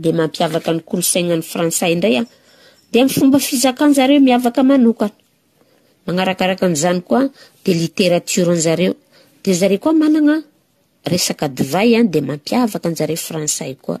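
Generation loss runs throughout the speech. The audio was likely re-encoded around seven times, fitting AAC-LC at 64 kbit/s, with each pass requantising on a shifted frame grid. Noise and spectral holes pile up, attacks blur, and the sound turns swirly and hollow, empty above 14 kHz.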